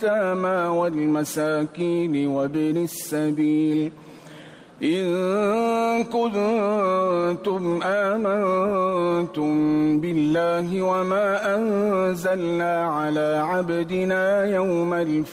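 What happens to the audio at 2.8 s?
Nothing goes wrong at 2.8 s; the audio plays through that moment intact, with no dropout, click or distortion.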